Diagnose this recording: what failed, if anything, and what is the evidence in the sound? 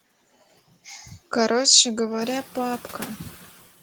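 The call processing stage is the culprit: noise suppressor artifacts run through the whole clip. The suppressor pulls the steady background down by about 15 dB frame by frame, so the noise dips between phrases and comes back under the speech.

There's also the noise suppressor catching up. Room noise jumps by about 18 dB around 2 s, and from 2.21 to 2.42 s it comes through with only about 5 dB of cut. The suppressor's noise estimate takes 210 ms to adapt before the noise sinks again.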